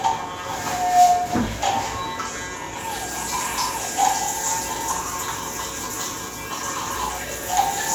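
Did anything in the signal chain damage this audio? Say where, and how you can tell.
Yes. Dropped buffers (overrun) occur at 1.47, 3.88, 5.01 and 6.96 s, likely in the driver or buffer stage during capture. Each one is an abrupt jump in the sound with no gap of silence. Roughly 40 ms goes missing at 1.47 and 6.96 s, and about 20 ms at 3.88 and 5.01 s. The software fell behind and the hardware wrote over samples it had not yet collected, so the surviving audio on either side is spliced straight together.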